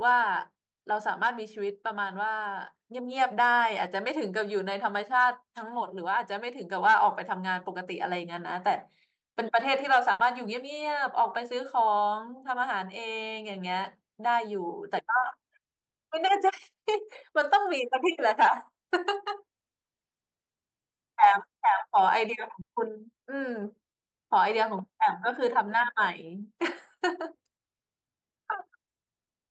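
At 10.11 s and 22.61 s the sound stretches and fades for 80 and 60 ms, then the speech skips ahead: a burst of packet loss.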